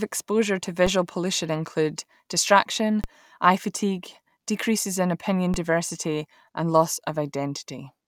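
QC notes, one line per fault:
0.87 s, 3.04 s, 5.54 s: DC step, the zero line jumps about -17 dBFS after "exposure to", "pollution include distraction" and "fatigue decreases in opinion", giving low thumps that fade as a 20 Hz high-pass bleeds the offset away.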